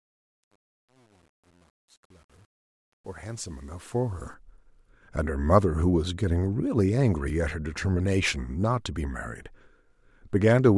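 Speech clip with truncation distortion on a fade across the fade-in from 0.0 to 4.34 s. The gain stage quantises the rising signal without dither, so at low levels the waveform collapses into coarse square steps, a resolution that fits about 9 bits. From 0.0 to 3.72 s the sound is gritty. By 4.34 s the level is high enough that the grit is gone.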